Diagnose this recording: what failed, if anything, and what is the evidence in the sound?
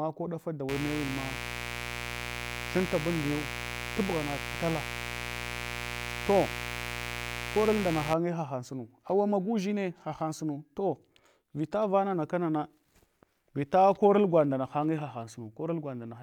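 Mains buzz in the analogue wiring: raspy 60 Hz buzz from 0.69 to 8.14 s, after "ɗafa da" until "hahau sunu awa magu", from switching spikes leaking in.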